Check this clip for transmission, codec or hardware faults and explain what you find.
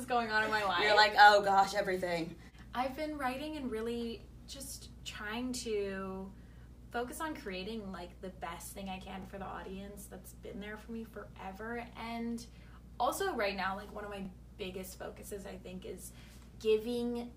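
One fault recurs in this clip. Overlapping chunks appear at 4.20–4.23 s, 9.23–9.25 s and 14.25–14.28 s. The audio was handled in 5-second blocks, and each new block began about 25 ms before the previous one finished, so that sliver of sound plays twice at every boundary. The result is a brief stutter or click every 5 seconds, where the doubled 25 ms fragment breaks the continuity of the sound.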